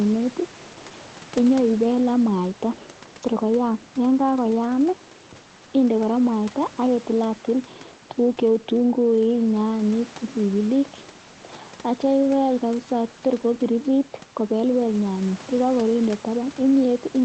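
No faults found: room noise sits about 24 dB below the speech, and the top end stops near 8 kHz, which fits a low-bitrate Opus call path.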